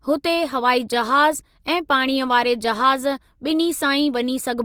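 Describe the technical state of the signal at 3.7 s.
At 3.7 s the speech carries plainly audible codec damage, present across the whole clip rather than just this moment. It is likely Opus compression in its CELT music mode, which fits a low bitrate around 24 kbps. The encoder preserves each band's energy but fills starved bands with folded or noise content, so the speech sounds rough and grainy rather than swirly. A spectrogram would show energy reaching about 20.2 kHz with few holes, but noisy, smeared texture in the upper bands.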